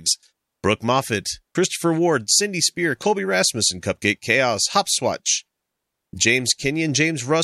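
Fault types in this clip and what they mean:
Electrical switching spike: A nearby switch, motor or static discharge likely threw a brief electrical arc that the audio line picked up and added on top of the recording. At 3.02 s it shows as a sharp snap over the speech, lasting only a few milliseconds and peaking at roughly -15 dBFS.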